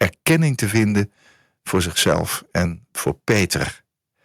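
A speech recording with two related faults. Microphone overload appears as a harsh, crackling edge on the loudest syllables from 0.01 to 0.36 s, 0.63 to 1.01 s, 1.74 to 2.21 s, 2.56 to 2.63 s and 3.06 to 3.62 s, with a few percent of the waveform flattened at each peak. The likely cause is an input gain set too high, pushing peaks about 7 dB past the converter's limit in the first burst and about 4 to 5 dB later. Unlike codec distortion, the grit rises and falls with loudness and leaves quieter stretches clean. The microphone volume stepped down at 0.31 s, an abrupt drop of about 2 dB in both speech and background, coming during the first distorted burst. This is likely the call software cutting the input level in one step after detecting the clipping. A single instant shift separates it from a gradual fade or a smoothly acting gain control. The clipping continues in every later burst.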